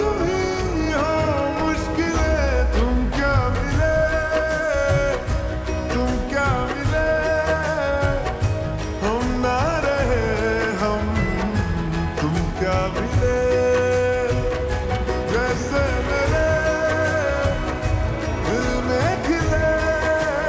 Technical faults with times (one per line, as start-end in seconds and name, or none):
none